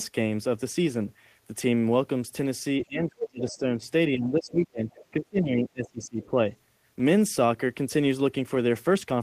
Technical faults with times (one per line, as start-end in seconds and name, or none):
2.84-3.83 speech suppressed in double talk
4.08-6.34 speech suppressed in double talk
4.89-5.05 other side's voice leaking through
6.23-6.27 other side's voice leaking through